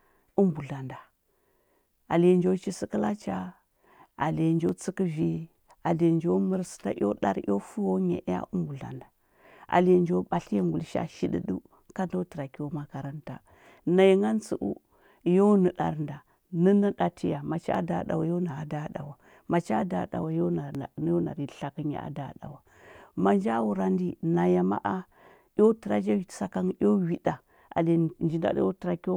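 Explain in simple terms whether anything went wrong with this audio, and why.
Dropped buffer (overrun) at 4.69, 17.75 and 20.75 seconds: the speech jumps ahead, with no gap of silence. The likely cause is the recording software falling behind, so the sound card wrote over a chunk of audio before it was saved, and the two sides were joined directly. Roughly 20 milliseconds went missing at the first spot, about 10 at the second, and only a few at the third.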